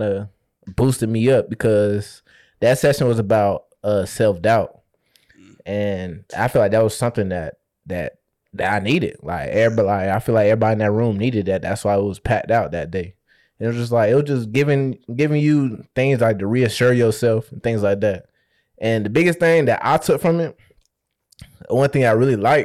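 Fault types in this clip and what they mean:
hard clipping: speech peaks driven about 6 dB past the limit are sliced flat, giving brief crackle on loud syllables, sharper and grittier than the rounded warmth of soft saturation.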